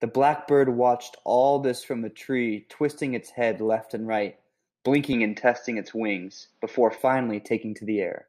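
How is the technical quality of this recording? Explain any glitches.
The speech has one glitch, a sudden change in tone partway through. From 5.13 to 6.98 s, the input likely switched to a poorer device. The capture path then cut everything above about 6.4 kHz. So the speech loses its crisp top end and turns dull and boxy. The level shifts by a few dB. A faint new background noise appears, well below the speech. There is no gap at the switch. The change is instant. At 6.98 s the brighter sound returns.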